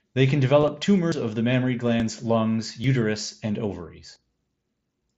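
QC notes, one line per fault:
0.60–0.68 s, concealed Bluetooth headset packet loss: About 30 ms of audio goes missing in short gaps spread over 75 ms, none longer than 15 ms. Each gap is filled by repeating a matching slice of the preceding waveform, so there is a brief buzzy, held texture and a slight warble as the real signal resumes. Unlike a buffer drop, nothing is skipped and there is no click.
1.12, 2.00, 2.84 and 4.16 s, dropped buffer (overrun): At each point the sound lurches forward where the two sides of a missing piece are joined directly. Roughly 70 ms disappears at 1.12 s and about 40 ms at each of the others. The cause is likely samples being overwritten before they were collected. There is no gap-filling tone, only an abrupt jump.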